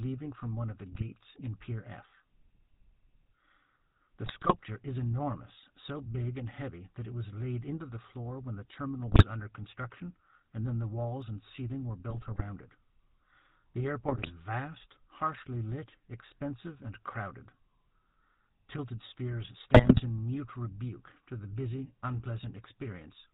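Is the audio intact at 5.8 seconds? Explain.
No, at 5.8 seconds the speech sounds buzzy and gravelly, with nothing above 4 kHz, as throughout: GSM full-rate codec damage, pulse-driven vocal-tract modelling consistent with 13 kbps.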